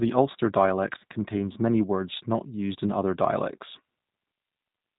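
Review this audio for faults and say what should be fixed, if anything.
The G.729 codec colours the whole speech clip with plainly audible roughness and a synthetic edge; the spectrogram shows nothing above 4 kHz, consistent with an 8 kbit/s encoding. Prevent it by carrying the call over a wideband codec with more bitrate.

VoIP packet loss concealed by the speech codec occurs from 0.98 to 1.03 s. About 30 ms went missing, fitting three 10 ms frames, and the decoder extended the last pitch and filter with falling gain. On the waveform it shows as a shrinking envelope, and on the spectrogram as smeared, flattened harmonics. Prevent it with jitter buffering, forward error correction or a network path with less loss.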